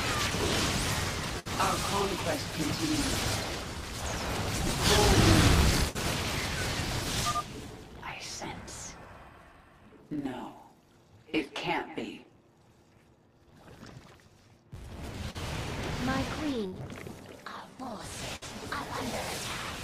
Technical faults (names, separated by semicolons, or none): filter restarted on every block; burst of packet loss; short concealed packet loss